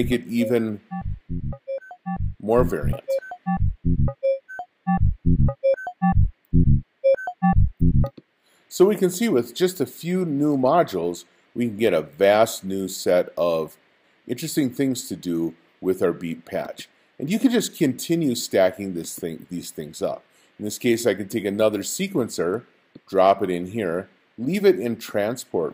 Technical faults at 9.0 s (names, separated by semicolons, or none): clock slip clicks